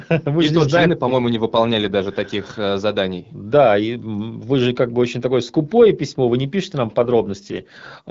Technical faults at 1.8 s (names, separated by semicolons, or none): AMR rate drop